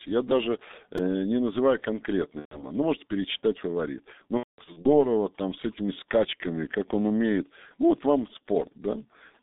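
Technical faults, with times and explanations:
throughout G.723.1 codec: The speech passes through a low-rate telephony coder, heavily degraded and consistent with about 6.3 kbit/s. The band is limited to roughly 200 Hz to 3.7 kHz, and its slow-updating voice model leaves the voice muffled and hoarse, with smeared consonants.
0.98 s repeated buffer: Fresh audio missed its deadline, so the same 2.9 ms block, which fits a 128-sample buffer, was replayed three extra times. The hard joins make a brief click or buzz, and around 10 ms of real audio is lost.
2.39–2.65 s and 4.37–4.89 s VoIP packet loss concealed by the speech codec: Lost packets forced the decoder to extrapolate from its last pitch and filter. The first gap is 120 ms long. The second totals 300 ms spread over 480 ms, with the longest run at 210 ms. The second gap fades and then goes silent, since the codec mutes from the third lost frame in a row, and the voice stays distorted briefly afterwards.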